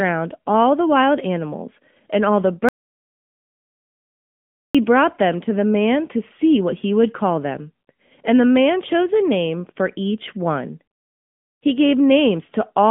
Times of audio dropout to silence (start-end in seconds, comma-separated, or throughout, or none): 2.69-4.75